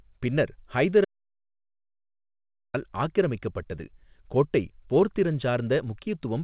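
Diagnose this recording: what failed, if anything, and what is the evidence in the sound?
An audio dropout to silence cuts in at 1.05 s after "பின்னர் ஹைதர்" and holds until 2.74 s, where "ஆக்கிரமிக்கப்பட்டது கோட்டை" resumes. For about 1.69 s the waveform is flat and the spectrogram blank, with no room tone. The likely cause is lost capture input.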